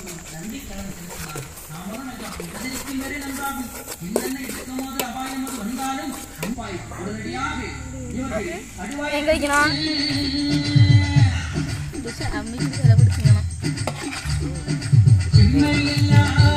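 Nothing goes wrong anywhere in this audio, so there's no fault to point to at any moment.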